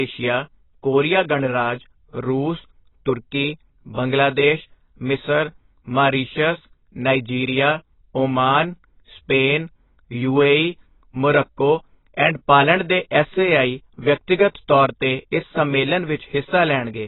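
Speech with heavy AAC compression throughout, likely at a very low bitrate near 16 kbps: a spectrogram shows nothing above 3.9 kHz, and it sounds dull and warbly.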